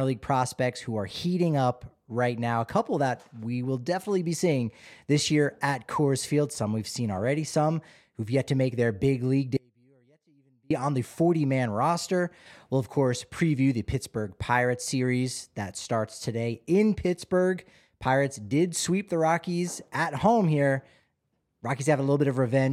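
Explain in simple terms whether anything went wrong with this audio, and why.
Something did go wrong: an audio dropout to a faint residue. Right after "make their big league", at 9.57 s, the speech cuts out abruptly and only returns at 10.70 s, just before "on the". For those 1.14 seconds, all that remains is a faint trace of sound, far quieter than the speech around it. The signal was likely interrupted somewhere along its path while the connection after that point stayed live, which explains the sudden break.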